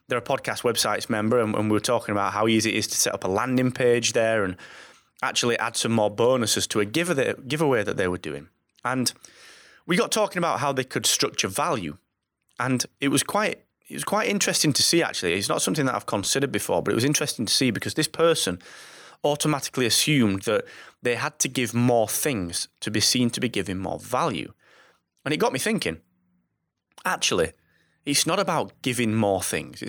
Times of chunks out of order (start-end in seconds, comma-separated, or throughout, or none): 16.24